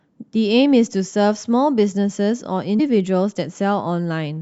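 At 2.76 to 2.80 s the speech breaks into a brief glitch lasting about 40 ms, the sign of damaged data in a compressed stream. Corrupted bytes made the decoder misread those frames and lose sync until it locked onto the next valid frame header.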